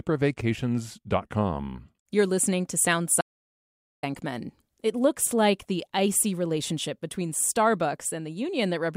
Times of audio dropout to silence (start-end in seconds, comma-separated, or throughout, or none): 3.21-4.03